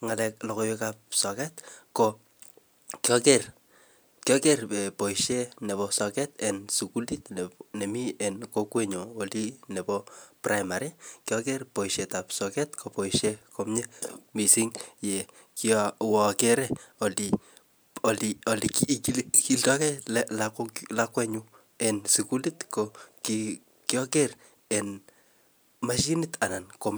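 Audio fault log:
No audible faults detected.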